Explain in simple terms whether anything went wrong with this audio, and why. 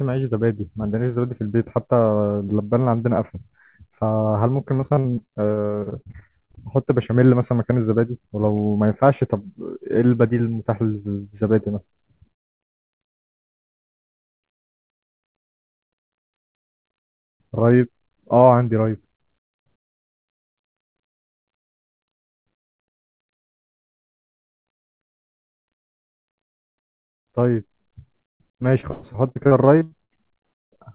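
Repeated packet loss (robotic sound) breaks up the speech four times: from 4.8 to 6.59 s, from 12.33 to 13.2 s, from 13.59 to 14.8 s, and from 28.81 to 30.11 s. Small chunks of the call data never arrived in time. Each time, the receiver filled the hole by stretching out the last bit of sound. The holes came one after another, up to 25 in the first stretch. So the voice turns choppy, with pieces missing. The longest single hole, about 0.12 s, is near the end.

A jitter buffer slow-down runs from 12.47 to 14.93 s, overlapping the second and third choppy stretches. The receiver's waiting room for incoming sound was running low, or had just been set to hold more. To refill it, the receiver repeated tiny slices of the audio. This adds only about 56 ms in total. The speech plays at 98% speed with the same pitch, so it sounds slightly drawn out and can wobble a little. This happens on top of the choppiness.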